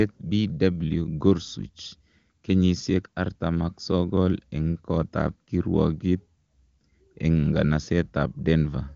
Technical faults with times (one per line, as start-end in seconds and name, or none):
none